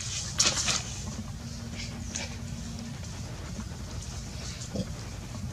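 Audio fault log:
3.71 to 5.53 s, mains hum. A steady low tone at 60 Hz comes in at 3.71 s and holds to the end of the clip. It sits well under the main sound, roughly 15 dB below it. Its pitch does not move. The power line is leaking into the signal path, through a ground loop or a nearby transformer. The mains frequency gets added to the audio, so it comes through as a fixed drone.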